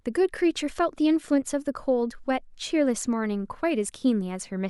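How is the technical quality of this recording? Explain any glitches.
No glitches or technical problems can be heard here.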